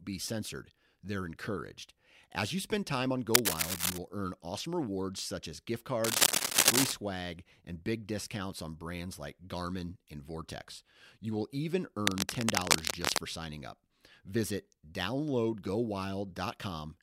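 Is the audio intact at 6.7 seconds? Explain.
No. Likely a worn cable or connector shifting, its contact resistance jumping about, causes cable scratch noise from 6.04 to 6.92 s after "rewards such as gift": rough, rustling scratching well above the speech.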